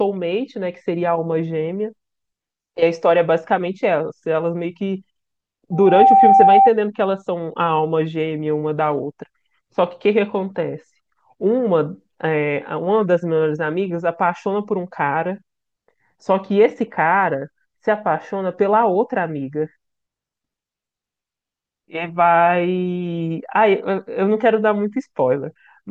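From 5.72 to 6.71 s a loudspeaker feedback squeal swells: the microphone hears its loudspeaker and the loop runs away at 781 Hz, peaking about 10 dB above the speech within a third of a second. Spectrograms show one bright horizontal line; the waveform balloons.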